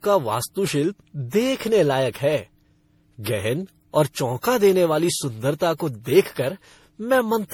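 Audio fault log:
Throughout: generation loss. The speech has a swirly, smeared, hollow quality, with consonant attacks blurred. This is more damage than a single encode at this quality would cause, even though content still reaches about 20.2 kHz. The likely cause is repeated lossy re-encoding, around seven passes, consistent with a 64 kbit/s MP3 chain. Each pass quantises on a shifted frame grid, so noise and spectral holes accumulate.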